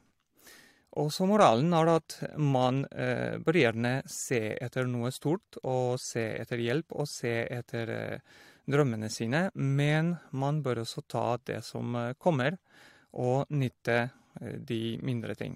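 A speech recording with nothing technically wrong to point to.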